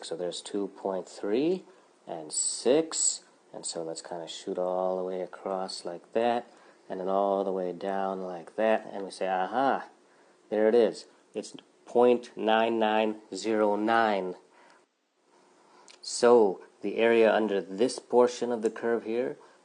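Nothing in this one stands out as a technical problem; it just runs along without any glitch worth pointing to.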